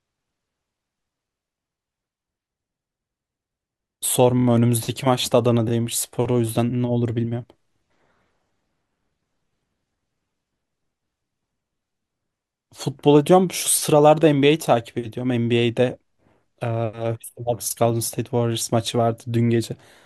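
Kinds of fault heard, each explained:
Repeated frames: one 24 ms compressed frame plays three extra times near 4.38 s, a brief speech stutter adding 72 ms; spectrogram shows identical slices side by side, waveform a repeating block.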